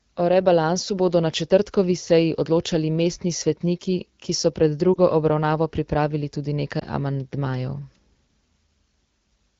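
At 4.93 to 4.98 s and 6.80 to 6.84 s, the speech dips and warbles briefly. These are lost AMR speech frames. Each gap fits one missing 20 ms frame, bridged by repeating the last good settings at falling gain.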